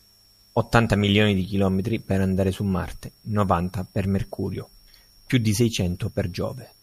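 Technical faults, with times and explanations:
No technical faults can be heard anywhere in this speech recording.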